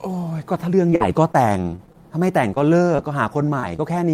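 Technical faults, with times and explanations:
0.90–1.97 s: repeated packet loss (robotic sound). Seven gaps, the longest 45 ms, were patched by extending earlier sound, so the speech turns choppy, with pieces missing, with smeared, flattened harmonic blocks on a spectrogram.
2.54–2.58 s, 2.96–3.00 s, 3.60–3.64 s, 3.76–3.80 s: short concealed packet loss. About 20 ms went missing each time and was filled by continuing the previous sound, giving brief smears or wobbles, with a short repeated-looking stretch in the waveform.
2.59–2.84 s: jitter buffer slow-down. Repeated pitch periods added 37 ms, so the speech runs at 88% speed with unchanged pitch, and harmonics look stretched horizontally on a spectrogram.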